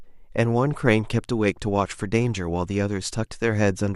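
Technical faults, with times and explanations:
No technical faults can be heard in the speech; the signal stays continuous throughout.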